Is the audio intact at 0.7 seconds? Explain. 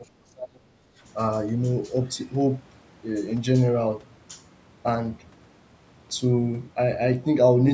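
No, not quite. At 0.7 s you're still inside a stretch of speech suppressed in double talk, running from the very start to about 0.76 s. The speech drops away hard, at its deepest roughly 35 dB down, so it is turned down for most of that opening. The likely cause is an echo canceller that heard both ends talking at once, couldn't tell this talker from the loudspeaker echo, and turned the lot down.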